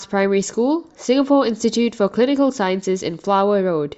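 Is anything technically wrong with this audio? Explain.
No, nothing in this recording stood out as a technical problem on listening.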